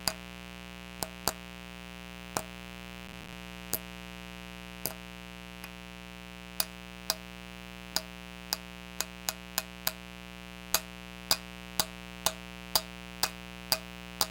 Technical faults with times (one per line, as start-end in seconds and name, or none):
0.00-14.30 mains buzz
3.08-3.33 processor overload crackle